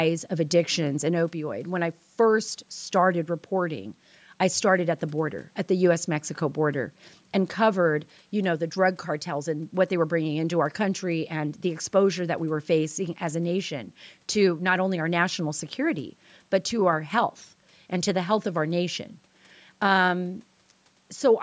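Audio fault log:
No faults found in this speech.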